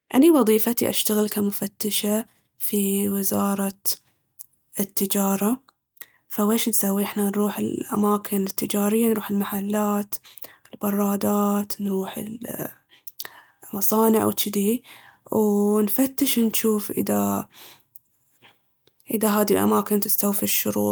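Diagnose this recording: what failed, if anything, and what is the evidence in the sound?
Nothing failed in this recording.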